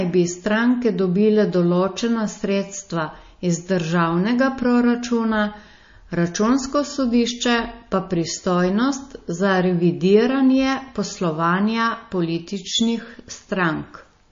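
Throughout the speech, a hard ceiling at 7.2 kHz leaves the spectrogram blank above it, and weak components flicker in and out as speckled islands. Sibilants sound swirly and metallic, and attacks smear. This is likely MP3 compression at a low bitrate, which fits roughly 32 kbps.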